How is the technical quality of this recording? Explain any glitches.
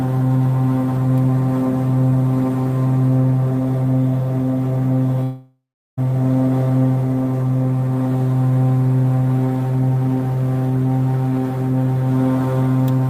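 The recording has one clear glitch, a long network dropout from 5.23 to 5.99 s. The last sound is stretched into a buzz or hiss that fades out, then comes about 0.37 s of silence, and the audio resumes with roughly 0.74 s of material missing. This is likely a stall in the incoming stream, during which the receiver padded the gap with a decaying copy of the final sound. On a spectrogram, the partials smear horizontally and thin out into blank space, which ends abruptly where the audio returns. The waveform shows a shrinking envelope, then a flat line.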